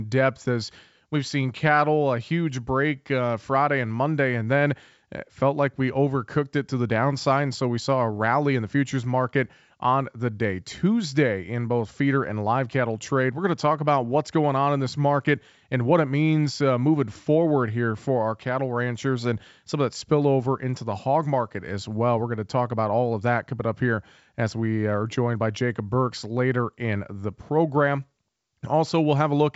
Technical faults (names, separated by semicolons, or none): none